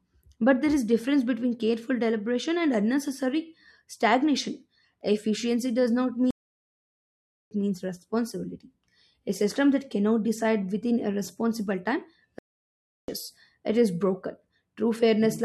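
Playback stalls at 6.31 to 7.51 s, after "does not", and at 12.39 to 13.08 s, after "within a responsible time". The speech cuts to silence for 1.2 s, then 0.7 s, resuming at "means responsibility" and "it is broken", likely because the player ran short of data.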